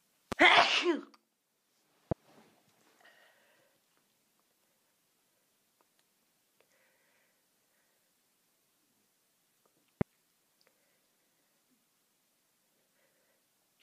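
Three loud pops break in, at 0.32 s, 2.11 s and 10.01 s. Each is a single sharp pulse lasting about 26 ms. The first two peak roughly 20 dB above the sound, the last one higher. The sound carries on underneath. A likely cause is a brief voltage spike from a switch, plug or static.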